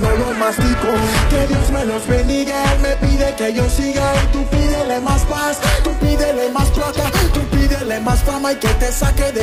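For the first 6.0 seconds the audio sounds dull and smeared, with nothing above 12.3 kHz and any treble thin or artificial, before it abruptly turns clearer with no break. This is an adaptive stream starting at a low bitrate. The opening sound points to a stream of roughly 16 kbit/s that rebuilds its top end synthetically, and the player then stepped up to a richer encode once it had measured the connection.

At 8.06 s there is a single sharp tick. This is a block of digital silence. For 2.9 ms the output dropped straight to silence and back with no fade, and the hard edges produce the click. A gap of this length fits a 128-sample buffer that was not filled in time.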